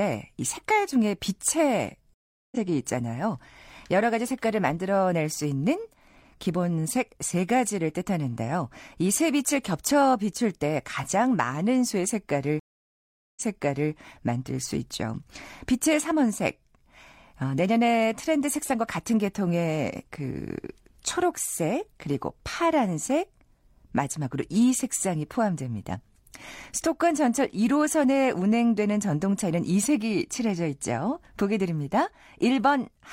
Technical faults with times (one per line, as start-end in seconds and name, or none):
2.14-2.56 stream reconnect
12.59-13.92 stream reconnect